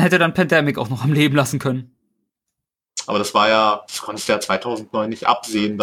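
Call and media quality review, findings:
Periodic clock jitter, 3.11 s to end: rough, metallic edge on speech. Converter clock modulated at around 2 kHz, adding sidebands at that spacing, strongest on high-frequency components.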